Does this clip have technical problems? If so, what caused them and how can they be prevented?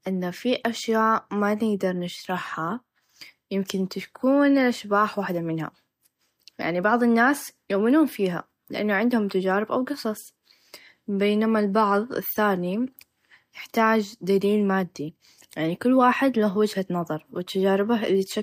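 No, no technical faults here.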